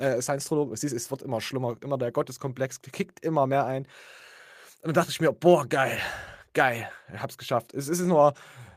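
Listening to this speech recording, nothing stood out as a technical problem anywhere in it.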